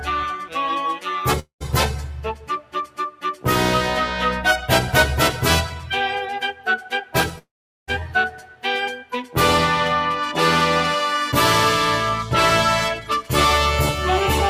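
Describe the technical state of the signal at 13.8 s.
A noise suppressor applied to music or sounds is active at 13.8 s and throughout, treating sustained tones and tails as noise, so levels pump by around 5 dB.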